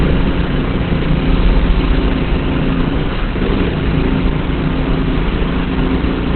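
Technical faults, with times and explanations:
Throughout: Opus compression; nothing above 4.2 kHz remains and the sound is muffled and hoarse, likely its narrowband speech mode, which fits about 12 kbps.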